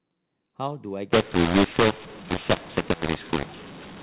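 From 1.12 s to the end, the speech turns harsh and gritty: some levels come out too large and others too small, and the pauses fill with hiss. This is mu-law and A-law mixed up. Telephone samples written as A-law are being decoded as mu-law, which scrambles every level and lifts near-silent samples well above zero. Throughout, the audio sits in the narrow telephone band with nothing above 4 kHz, which fits G.711 coding at an 8 kHz sample rate.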